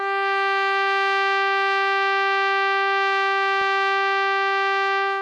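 At 3.61 s the music has DAB burbling. Leftover bit errors corrupt a few MP2 frames, causing a few brief watery blips that show as isolated sub-band blocks on a spectrogram.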